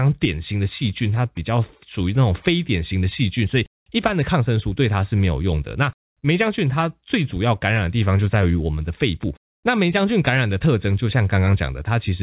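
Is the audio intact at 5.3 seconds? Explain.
Yes, the speech at 5.3 s is intact, with only the narrow band of the G.711 mu-law call path, which leaves nothing above 4 kHz.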